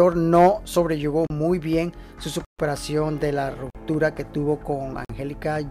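The audio drops out four times in blocks of digital silence: 1.27 to 1.30 s (about 32 ms), 2.45 to 2.59 s (about 139 ms), 3.70 to 3.75 s and 5.05 to 5.09 s (about 46 ms each). Each cuts hard to silence and back with no fade. The shorter gaps read as pops and the longest as a short hole. The two identical gaps fit a 2048-sample buffer left unfilled in time.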